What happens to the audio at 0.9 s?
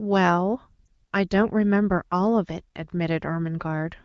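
Just before that moment, from 0.86 to 0.88 s, one lost AMR speech frame, about 20 ms, causes a brief dip or warble. The decoder bridges the gap by repeating the last good pitch and vocal tract settings at reduced gain. The speech then resumes.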